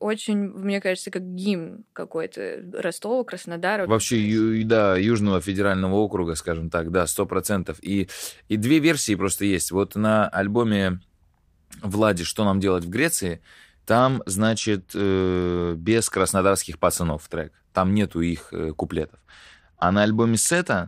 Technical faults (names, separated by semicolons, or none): Bluetooth SBC bit pool drop